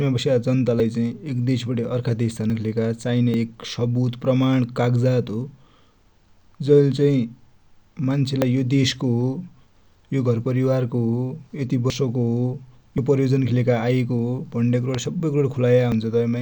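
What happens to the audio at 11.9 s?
At 11.9 s a dropped buffer (overrun) is likely: roughly 70 ms of speech is skipped, the two sides butt together, and the sound jumps ahead.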